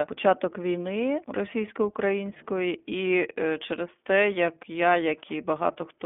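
Speech coded with the iLBC codec throughout, passing only about 200 Hz to 3.5 kHz, with plainly audible rough, synthetic texture. Unlike a clean band-limited phone line, the grit renews every frame, fitting 20 ms frames at around 15.2 kbps.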